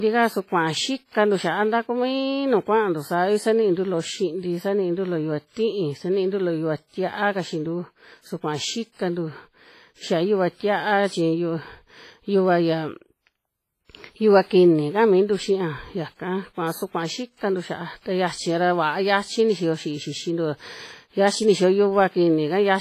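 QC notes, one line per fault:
Throughout: likely WMA compression. Long transform blocks smear heavy quantisation noise, so speech rings and washes, with breathing hiss. Nothing above 15.5 kHz, fitting about 24 kbps.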